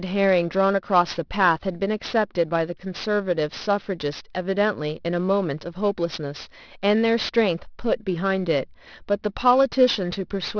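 Throughout, the speech was resampled without an anti-alias filter, folding energy above 5.5 kHz back down as aliasing, roughly 20 dB below the signal, which fits an 11 kHz rate. Sibilants sound gritty and metallic.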